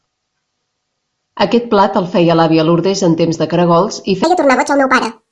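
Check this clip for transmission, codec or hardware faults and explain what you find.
There is one fault, a wrong sample rate, at the very end. From 4.24 s to 5.31 s the speech suddenly runs 1.5 times too fast. The samples are being played back faster than they were captured, with no conversion. That fits 16 kHz audio played out at 24 kHz. Speed and pitch rise together, so the voice jumps up about 7 semitones. It sounds high, squeaky and hurried until the clip ends.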